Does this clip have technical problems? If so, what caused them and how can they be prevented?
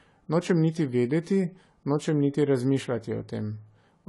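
Yes. Likely AAC compression at a low bitrate, around 32 kbps, cut everything above 11.5 kHz throughout, leaving the speech dull, smeared and fizzy on sibilants. Encoding at a higher bitrate, or keeping an uncompressed copy, would prevent this.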